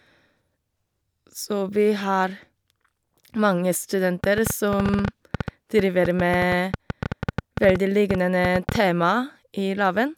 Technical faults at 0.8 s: none

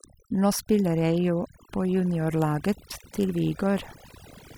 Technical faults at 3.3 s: overdone noise removal

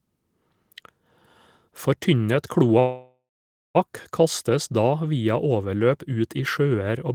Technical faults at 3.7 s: call audio freeze

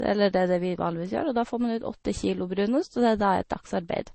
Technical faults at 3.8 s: transcoding between lossy codecs

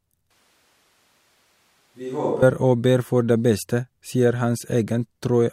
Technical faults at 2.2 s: switch to a distant microphone

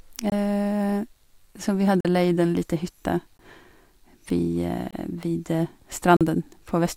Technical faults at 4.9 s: block of digital silence

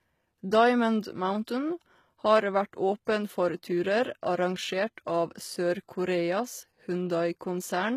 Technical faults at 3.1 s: HE-AAC compression; pre-echo

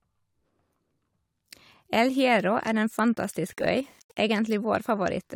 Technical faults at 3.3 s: low bit depth without dither

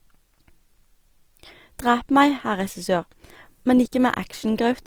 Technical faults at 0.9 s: Opus compression

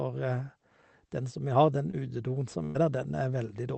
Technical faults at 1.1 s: none

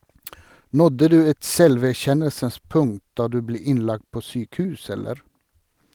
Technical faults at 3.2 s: clock drift between sender and receiver; repeated timing corrections

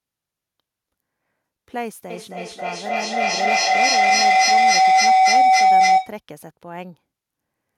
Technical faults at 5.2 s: feedback howl

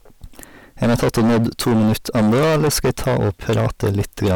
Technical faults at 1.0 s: hard clipping

